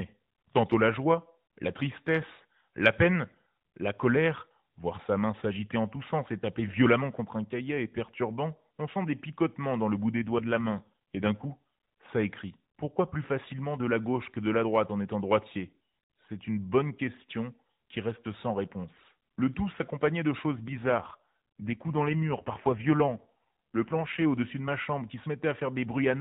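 From 10.16 to 11.58 s, after "picotements dans le bout" and until "ça écrit", and again from 20.48 to 24.23 s, after "tout s'accompagnait de", the speech turns rougher, buzzier and more synthetic with no gap or band change. These are AMR rate drops, where the mobile codec falls back to fewer bits per frame, consistent with a step down from about 12.2 to 5.9 kbps.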